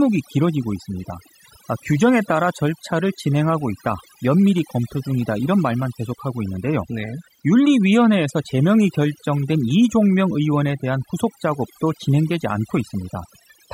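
Across the whole speech clip, the background sinks to near silence dotted with twinkling, chirpy specks. This is overdone noise removal: the reducer, set too hard, shuts off individual frequency bands near its noise estimate, stripping quiet voice detail along with the noise.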